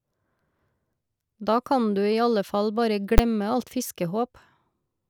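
At 3.18 s, invalid numbers at full scale: a failed calculation pins a 10 ms block to maximum, heard as one bang, seen as a flat-topped rectangle and broadband spectrogram stripe.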